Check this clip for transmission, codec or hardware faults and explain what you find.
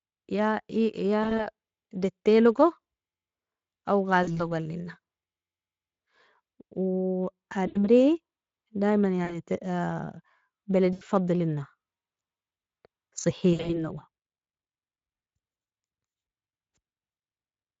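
The speech has recurring dropouts from VoIP packet loss concealed by the speech codec, at 1.23, 4.23, 7.67, 9.25, 10.93, 13.53 and 16.09 s. Each loses 40 to 120 ms of audio. At 1.23 and 13.53 s the gaps are scattered over 160 ms. The decoder repeats its last pitch and filter at falling gain, so the sound smears into a fading buzz or coloured noise and stays weak briefly afterwards.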